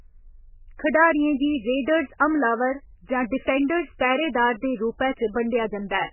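MP3 compression runs through the whole clip. The speech has nothing above 3 kHz and a heavily damaged, watery texture, which fits a very low bitrate of around 8 kbps. The encoder, likely starved of bits, dropped the entire upper band and kept only the strongest frequency lines. Weaker detail switches on and off between frames, so consonants swirl and blur and the voice takes on a thin, underwater quality.

Pre-echo occurs at 3.99 s. A sharp attack sits late in a transform block, so quantisation noise sized for the loud onset spreads back across the quiet moment before it, about 16 ms earlier. The result is a brief hiss arriving just ahead of the attack, which itself sounds softened and smeared rather than crisp.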